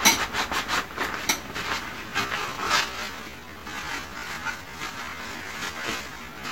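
From 2.03 s onward, software likely slowed the sound to half speed while holding pitch: a time-stretched section, where the pace changes abruptly and drags.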